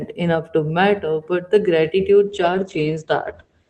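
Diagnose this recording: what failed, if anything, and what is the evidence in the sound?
A call bitrate drop at the network and codec stage hits from 2.29 s to the end. The speech turns rough and muffled as the Opus encoder's ceiling falls from 12 kHz to 8 kHz, which fits a rate cut from 32 to about 11 kbps. On a spectrogram, the energy above 8 kHz vanishes.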